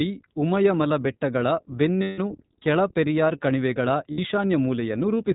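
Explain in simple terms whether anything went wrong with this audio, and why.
The whole recording has passed through the iLBC codec, a narrowband format built for internet phone calls. It discards everything above 4 kHz, so the speech sounds muffled and thin, like a phone line. It also rebuilds the voice from a simplified model in short, self-contained chunks, which gives it the plainly audible rough, slightly synthetic quality heard from start to finish.

There are also two spots with lost iLBC frames. Network packets carrying bits of the audio went missing, and the decoder filled each hole by repeating the last bit of voice mixed with some noise. The first gap runs from about 2.02 to 2.20 s, roughly 160 ms just before "ಕೆಳ ಪೆರಿಯಾರ್ ಕಣಿವೆಗಳ", and sounds like a held, buzzy vowel. The second, at about 4.12 to 4.19 s, is about 60 ms right after those words, and is a briefer smear. In both spots the voice recovers almost immediately.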